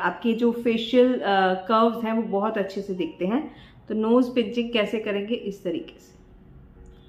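No technical faults can be heard anywhere in the audio.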